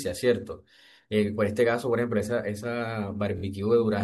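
At 3.37 s the speech stutters, a tiny fragment sounding three times. These are repeated frames: a 23.2 ms block played twice more, adding 46.4 ms.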